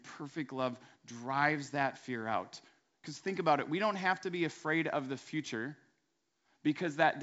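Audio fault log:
No faults logged; the speech carries the G.722 wideband telephone coding, band-limited with nothing above about 7.7 kHz and only faint coding hiss, which fits the full 64 kbit/s mode.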